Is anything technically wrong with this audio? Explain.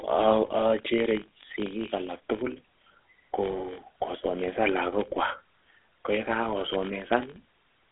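Yes. Two faults run through the whole speech clip.

First, a filter restarted on every block: each block starts from silence, producing a 46.9 Hz buzz, which fits a 1024-sample buffer. The waveform shows evenly spaced small transients; the spectrogram shows faint vertical lines.

Second, the GSM full-rate codec: pulse-driven vocal-tract modelling gives a plainly audible gravelly roughness over a 300 Hz to 3.6 kHz line band. The spectrogram is empty above 3.8 kHz.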